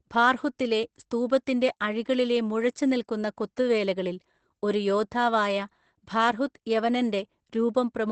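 Opus voice compression runs through the whole clip. The codec is in its linear-prediction SILK mode, which models the speech as a vocal-tract filter driven by a coarsely coded excitation. At a rate that points to around 12 kbps, that excitation is thin, so the speech sounds plainly muffled, hoarse and slightly robotic. The band stops near 8.6 kHz, which fits wideband operation and leaves sibilants dull and airless.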